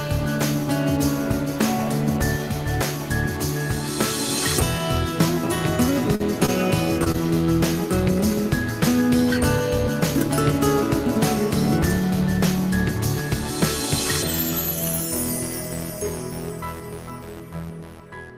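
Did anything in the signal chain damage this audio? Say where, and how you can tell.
Yes. Short concealed packet loss, a network fault, at 6.15–6.22, 6.46–6.50, 7.04–7.08 and 7.12–7.16 s: each time 20 ms of audio arrived too late, so the receiver extended the preceding sound and blended back, leaving brief smears or wobbles. The first gap also shifted playout timing by roughly 20 ms.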